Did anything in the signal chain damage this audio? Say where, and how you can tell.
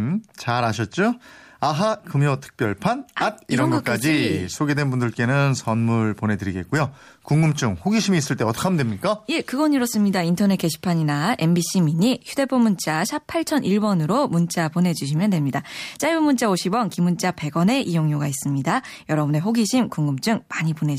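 No, nothing along the chain left a mark I can hear on this one, so there's no stage to point at.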